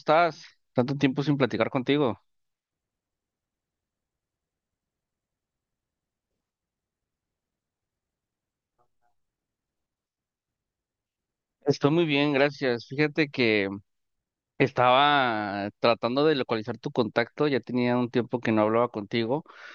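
Nothing stood out as a technical problem at any point on listening to the recording.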